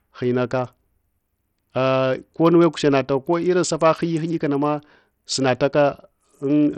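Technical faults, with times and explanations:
throughout: Bluetooth SBC compression, likely; the treble flickers and gritty grain rides on the speech, unlike a clean low-pass, which fits a heavily starved, roughly 64 kbps stream.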